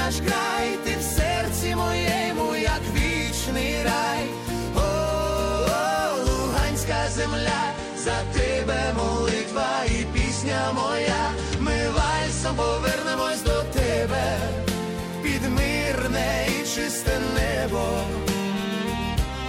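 An adaptive stream at a lower bitrate runs from 6.87 to 12.87 s: the connection slowed, so the player switched to a leaner version of the audio, which fits a drop from around 96 to 32 kbit/s. For those 6.0 seconds codec artefacts rise and nothing sounds above 9.6 kHz. The quality changes suddenly, with no gap.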